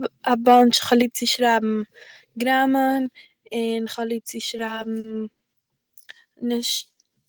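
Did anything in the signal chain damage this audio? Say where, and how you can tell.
Yes. Microphone overload at 0.92 to 0.94 s, at the converter: a loud syllable's peaks run about 1 dB past full scale and their tops are flattened across a small fraction of samples. This is likely from input gain set too high, and it gives a brief harsh crackle.

Microphone volume stepped down at 1.02 s and again at 3.06 s, in call processing: the whole signal, voice and background together, drops abruptly by about 5 dB and then about 2 dB. The first drop follows the clipped peak closely, likely the software's automatic gain cutting input volume.

Repeated stalls (stutter) from 4.57 to 5.43 s, just after "איך האב ליב צו", at the network and jitter buffer: six gaps, the longest 70 ms, are filled with about 150 ms of held sound. Late packets emptied the buffer repeatedly, so playback drags without losing anything.

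Jitter buffer slow-down from 6.91 to 7.28 s, in the receive buffer: the sound plays at 84% speed with unchanged pitch, stretched by 64 ms. The receiver repeated pitch periods to rebuild its reserve, so sounds are drawn out.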